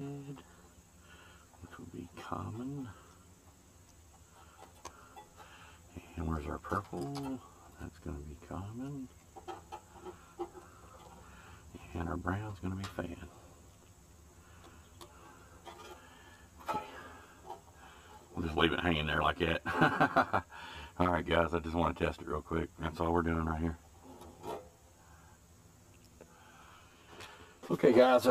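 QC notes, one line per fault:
Throughout, channel delay (comb filtering): one channel trails by around 10 ms before the mono sum, cutting evenly spaced notches from around 40 Hz upward, so the audio sounds hollow and phasey.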